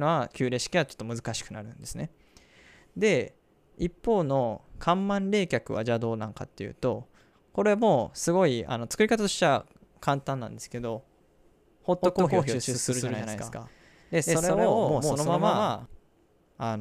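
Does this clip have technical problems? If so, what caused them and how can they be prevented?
Yes. From 12.02 to 15.86 s there's a doubled audio track: a second full-band copy of the speech trails around 150 ms behind at roughly the same level, then cuts in and out abruptly. It's likely a second, slower capture path mixed in alongside the main one. To prevent it, make sure only one input path feeds the mix, and mute any duplicate monitoring or loopback route.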